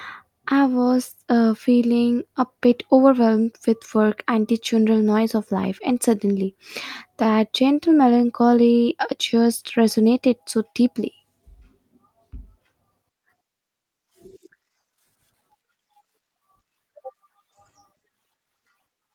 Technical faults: none

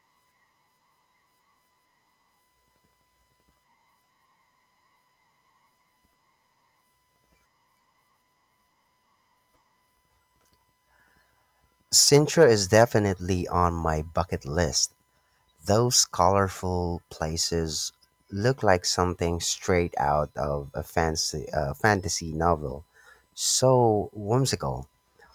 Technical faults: none

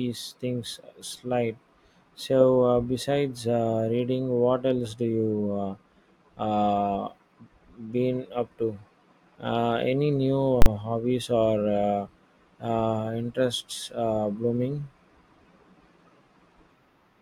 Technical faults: invalid numbers at full scale

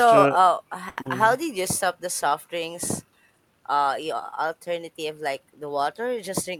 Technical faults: short stall from a late packet; short concealed packet loss

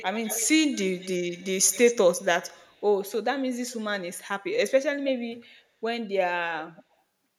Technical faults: echo leak

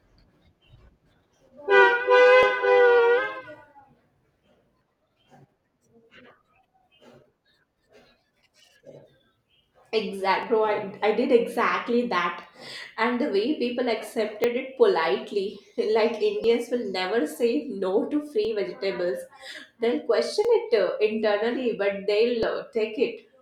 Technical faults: periodic USB or driver dropouts

